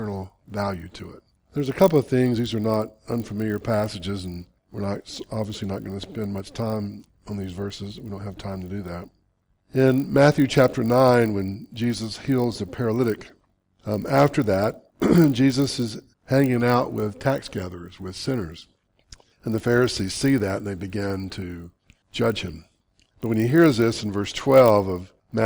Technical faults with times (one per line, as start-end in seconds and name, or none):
0.00-25.46 resampler restarted on every block